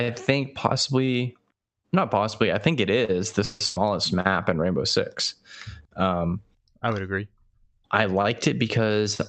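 At 3.44 s the speech stalls until 3.61 s. For about 160 ms the last sound is drawn out as a fading buzz or hiss, with no silence. The speech then resumes exactly where it stopped. Nothing is lost, but everything after it now runs 160 ms late. This sounds like a call audio freeze. Packets were likely held up in transit, so the jitter buffer ran dry and the receiver stretched the last sound to cover the wait.

Just after, from 3.66 to 3.77 s, comes a burst of packet loss. About 100 ms of audio never arrived in time to play. The receiver continued the last sound and let it fade over the gap. When the speech returns, it has jumped ahead, so that 100 ms is simply gone. The call path itself carries the speech through Opus at around 64 kbps, within an 8 kHz bandwidth.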